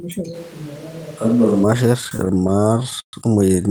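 Speech, with a switch to a distant microphone from 0.36 to 1.63 s: the sound turns roomy and hollow with thinner bass at much the same level, and background noise sits only about 25 dB below it, likely because the close microphone's signal dropped out. From 2.01 to 3.15 s there are repeated stalls (stutter), as late packets drained the jitter buffer and the last sound was stretched to fill about 330 ms, the longest hold 131 ms, with nothing lost.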